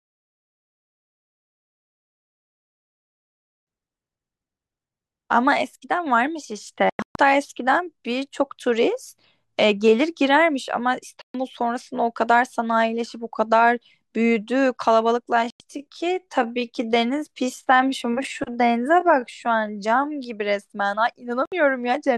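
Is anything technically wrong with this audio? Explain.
Yes. There are two kinds of fault. Digital broadcast dropouts mute the speech four times. The receiver lost good frames and went silent until they returned. The first, from 6.90 to 7.16 s, is several short holes, the longest 128 ms. Shorter gaps follow at 11.22 to 11.35 s, 15.50 to 15.60 s and 21.46 to 21.52 s.

From 15.30 to 20.24 s there is a time-stretched section. The pace drops to about 0.73 times normal while the pitch holds. This is likely from software repeating short pieces, so the speech drags.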